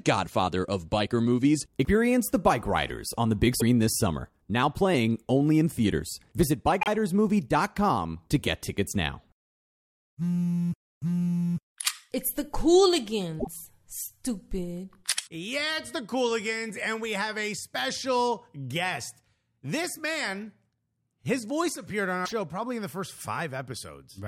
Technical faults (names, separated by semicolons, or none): broken MP3 bit reservoir